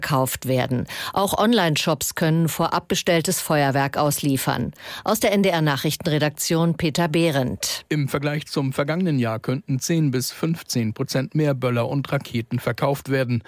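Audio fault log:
Nothing stood out on a careful listen to the recording.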